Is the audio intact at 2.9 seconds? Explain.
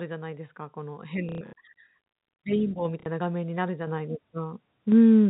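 No, not quite. At 2.85 s the microphone volume stepped up by about 4 dB in one jump: the call software judged the input too quiet and raised the device gain, so the voice and the background get louder together.

Right after, from 3.0 to 3.06 s, there's packet loss with the last packet repeated. About 60 ms went missing, which points to two 30 ms packets, and the receiver filled the gap by replaying the previous one, which you hear as a brief robotic stutter.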